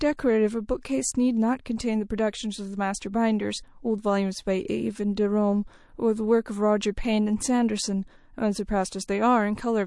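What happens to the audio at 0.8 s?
At 0.81 s a pre-echo appears: a brief hiss of about 15 ms leads into a sharp attack in the speech, sitting about 14 dB above the quiet floor just before it. Quantisation noise meant for the loud onset has been spread back across the whole transform block, which fits a long block of about 48 ms with no switch to short blocks. On a spectrogram it shows as a broadband smear just left of the onset. In the waveform a fuzzy low-level ramp replaces a clean start, and the attack sounds soft.

Around that moment, as across the whole clip, MP3 compression damage is plainly audible. The watery, swirly texture is likely caused by encoding at a low bitrate, which fits about 48 kbps. The encoder drops weak spectral lines that flicker on and off between frames. On a spectrogram this appears as speckled, blotchy holes that change from frame to frame.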